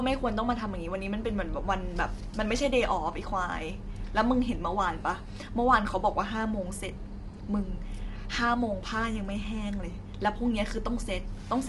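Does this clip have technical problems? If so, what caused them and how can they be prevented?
Yes. Low-delay AAC compression runs throughout: the speech sounds rough and grainy, with noise between the pitch harmonics and nothing above 11.6 kHz. The likely cause is AAC-ELD, whose short frames resolve harmonics poorly, at a rate that fits about 32 kbps. Raising the bitrate or using a longer-frame codec where low delay isn't needed would prevent it.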